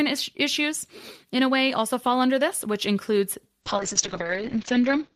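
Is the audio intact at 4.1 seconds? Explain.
No, 4.1 s sits inside a call bitrate drop from 3.64 s to the end, where the encoder falls from 48 to 6 kbps and bandwidth shrinks to 8 kHz, so the speech sounds rough and muffled.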